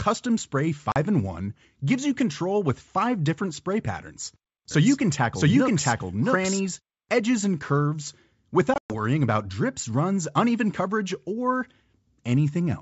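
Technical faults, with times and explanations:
0.92 s, packet loss on an ADPCM call: a short hard-edged gap of about 40 ms, roughly a couple of packets' worth, filled with silence. Because the decoder's predictor and step size kept adapting without the real data, they no longer match the sender's when the stream resumes, so the speech comes back slightly distorted before it settles over the next few tens of milliseconds.
4.71–6.61 s, doubled audio track: right after "five different spray patterns" the speech is mixed in a second time, a copy trailing by something like 0.7 s and about as loud as the original, until it cuts out just before "edges and curves". It's full-band with no reverb tail or room colour, and it starts and stops abruptly, so it's likely a second, slower capture path or an edit that left two misaligned copies.
8.74–9.01 s, packet loss on an ADPCM call: a worse burst, with 140 ms of audio dropped across 160 ms and the longest hole 120 ms, so several packets in a row went missing. 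The gaps are silent with sharp edges, and just before "about drips runs uneven" the speech returns with brief distortion while the decoder's adaptation catches back up with the sender's.
The G.722 wideband coding underneath at 64 kbit/s keeps the speech clear up to about 7 kHz, with at most a faint hiss in the top band.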